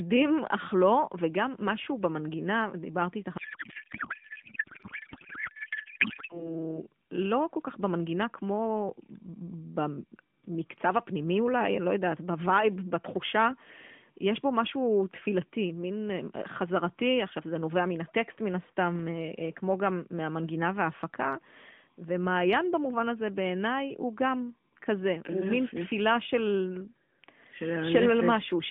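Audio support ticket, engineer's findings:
Codec payload misread, 3.38 to 6.60 s: receiver unpacking AMR frames with the wrong bit layout, likely octet-aligned payload parsed as bandwidth-efficient. Decoder pulls parameters from wrong fields; speech replaced by garbled noise and warble barely tracking it, over the light AMR-NB coloring.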